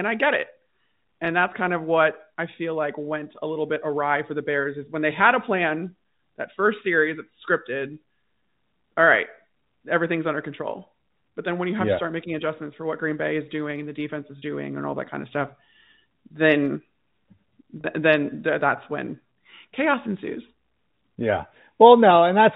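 Packet loss with pitch repetition hits this telephone-band speech: about 10 ms drops at 1.25 s before "that's kind of", and about 30 ms at 14.39–14.42 s after "and the defense is" and at 17.81–17.84 s, each filled by repeating the last pitch period, briefly holding a buzzy tone.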